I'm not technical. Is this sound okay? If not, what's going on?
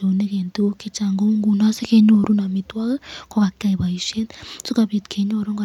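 Yes, nothing stood out as a problem when listening to this recording.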